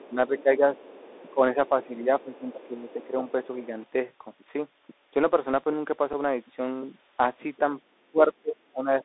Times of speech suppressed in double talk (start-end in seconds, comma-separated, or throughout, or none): 0.10-0.79, 1.34-3.17, 8.11-9.04